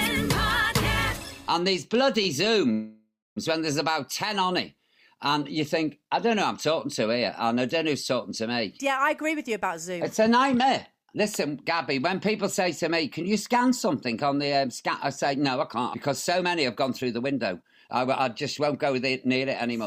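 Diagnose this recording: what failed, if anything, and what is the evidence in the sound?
The first problem is on the network side: a short stall from a late packet at 2.23 s. A packet didn't arrive in time, the jitter buffer ran dry, and the receiver held the last bit of sound for about 15 ms until the packet turned up. Nothing is lost, but you hear a tiny hold, a little smear or buzz, and everything after it sits 15 ms later.

Half a second later there's a bigger one, a call audio freeze from 2.72 s to 3.38 s. Packets were likely held up in transit, so the jitter buffer emptied and the receiver had to cover 645 ms. It continues the last sound as a fading buzz that drops to silence for about 250 ms, then playback resumes exactly where it stopped. That adds a gap rather than losing any audio.

Then the receiver works off excess buffered audio with jitter buffer speed-up, from 9.07 s to 9.97 s and again from 15.35 s to 19.86 s. 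It snips out tiny pitch-period-sized pieces over and over, running at 105% speed with the pitch unchanged. The first stretch trims roughly a twentieth of a second and the second around a fifth. You hear it as a slightly hurried, rushed feel.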